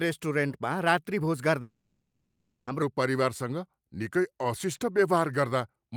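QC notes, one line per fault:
1.61 to 2.69 s, long network dropout. The speech breaks off and about 1.06 s of it never returns. In its place the last sound is stretched into a fading buzz that covers almost the whole gap, with only a brief silence of about 30 ms before the audio resumes. The cause is likely a run of lost packets that the receiver tried to conceal by extending what it had. The speech continues past the gap with the missing stretch simply gone.
2.82 to 5.96 s, section at the wrong speed. From here to the end, the speech runs slow at 0.884 times its proper rate. Pitch drops with it, by roughly two semitones, so the voice sounds deeper and more drawn out than the opening. The change is abrupt and holds steady to the close. The likely cause is that this segment was played or resampled against the wrong clock, which shifts timing and pitch together.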